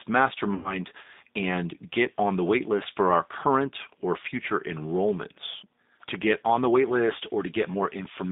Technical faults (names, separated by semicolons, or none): G.729 codec; VoIP packet loss concealed by the speech codec